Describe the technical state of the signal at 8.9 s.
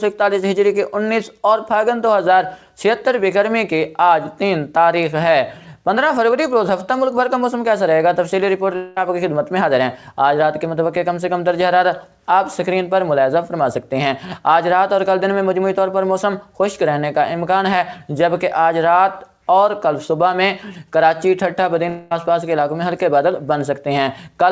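At 8.9 s the signal sits inside a gap from 8.76 to 8.97 s, likely a long network dropout. About 0.21 s of sound never arrives, and the receiver fills nearly all of it by extending the preceding sound as a fading buzz or hiss, with no silence before the sound resumes. The band-limited 8 kHz top edge throughout fits a G.722 call codec.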